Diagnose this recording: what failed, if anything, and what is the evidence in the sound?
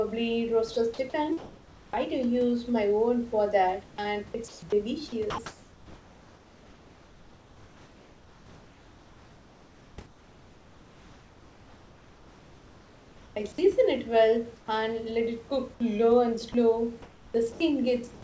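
Sound chopped by the voice detector, in call processing: from 0.74 to 2.19 s and again from 3.86 to 13.36 s the speech flickers between real audio and hiss. About 620 ms and 8.2 s respectively were swapped out, likely because the sender's voice detector kept toggling transmission off and on.

Comfort noise in place of the background, also at the call-processing stage: at 14.56 to 14.68 s the real room tone turns into a flat, featureless hiss about 5 dB quieter, sitting roughly 28 dB under the loud parts. Again from 17.52 to 18.22 s it goes synthetic. That's likely the receiver filling a transmission pause.

Sound dropped by the voice detector: tiny bites go missing at 16.52 to 16.54 s and 17.52 to 17.60 s, with roughly 10 ms and 30 ms of speech lost and steady noise standing in. The likely cause is quiet speech edges being mistaken for background, so sending stopped briefly.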